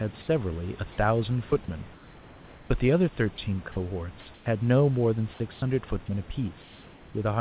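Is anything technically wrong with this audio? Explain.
Yes. Speech drops out briefly at 1.50 s, 3.36 s, and from 3.72 to 3.76 s, each time giving way to a flat, steady noise for 20 to 40 ms. This is sound dropped by the voice detector: it likely mistook quiet speech or a word ending for background, stopped sending, and the receiver played comfort noise in its place.

Between 4.34 and 4.46 s, and between 5.54 and 5.62 s, the room's textured background turns into a smooth, featureless hiss. It is about 5 dB quieter in the first gap and about 1 dB quieter in the second. This is comfort noise in place of the background, likely from discontinuous transmission: the sender stopped during the pause, and the receiver synthesised noise roughly shaped like the room.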